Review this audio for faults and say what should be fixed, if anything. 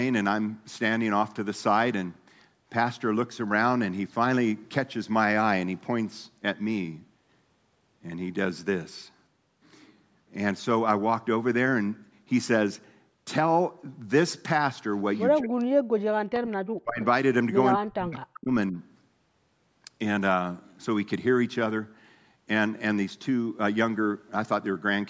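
Echo leak at 15.16–15.2 s: a faint copy of the sound returns about 214 ms late, roughly 30 dB down, likely residual loudspeaker pickup escaping the echo canceller.

Speech suppressed in double talk at 15.4–16.14, 16.81–17.01, 17.77–18.52 and 18.71–18.76 s: the level drops by about 40 dB, with only a slight dip in the last one. This is likely the canceller ducking the talker while both sides overlap.

Fix both by tuning or replacing the echo canceller and reducing loudspeaker-to-microphone coupling, for example with a headset.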